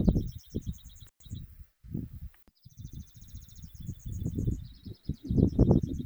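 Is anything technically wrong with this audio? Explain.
Yes. From 1.07 to 1.20 s the sound drops out for about 112 ms, crackling at each edge and leaving faint hiss: an intermittent contact, a loose cable or plug briefly opening.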